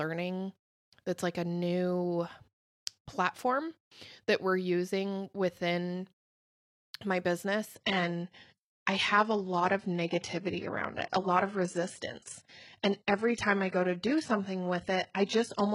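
From 7.75 s, an adaptive stream at a lower bitrate cuts in abruptly, with no gap. Nothing remains above 11.1 kHz, and codec artefacts rise.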